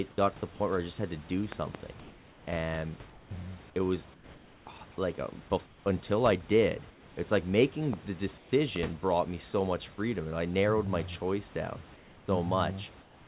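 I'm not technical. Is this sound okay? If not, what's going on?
No. A likely electrical glitch, such as a switch or static, produced loud pops: a double pop between 1.52 and 1.77 s just after "just had to do", and single pops at 7.93 s after "i did it's like" and at 8.76 s.

The call likely stopped sending audio in the pauses. Your end then played comfort noise in place of the background: a flat, slightly quieter hiss at 3.1–3.3 s, 4.14–4.66 s, 5.66–5.86 s, 6.9–7.16 s, 8.38–8.52 s, 11.96–12.28 s after "choice down", and from 13.02 s to the end.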